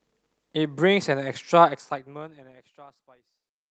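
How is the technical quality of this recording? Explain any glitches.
No glitches to report; the technical quality holds up.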